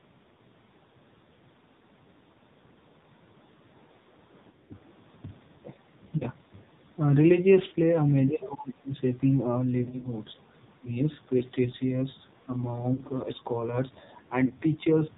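Throughout, the AMR narrowband mobile codec shapes the speech: nothing above 4 kHz survives, and the heavy damage gives a buzzy, synthetic edge that fits a low mode near 5.9 kbps. Unlike plain band-limiting, the voice itself sounds modelled rather than merely muffled.

Lost AMR speech frames appear at 1.34–1.37, 4.50–4.76, 6.18–6.25, 7.68–7.74, 9.84–10.12, 11.38–11.44, 12.94–13.01 and 14.46–14.53 s. The decoder stretches the last good pitch with fading gain, so each loss is a brief warble or smear. The scattered clusters around 4.5 s and 9.8 s sound rough for roughly 200 ms, never a clean cut.

From 8.28 to 8.98 s the speech drops sharply, by about 30 dB at worst, and at 12.45–12.49 s it dips briefly, by about 10 dB. These are likely speech suppressed in double talk, with an echo canceller ducking the talker. They are level drops rather than the drawn-out, warbling smear of a lost frame.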